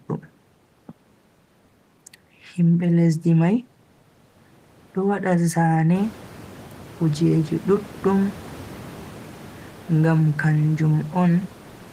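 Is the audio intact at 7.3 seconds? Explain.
Yes, the speech is intact at 7.3 seconds, with only the room's own background noise audible about 22 dB beneath it.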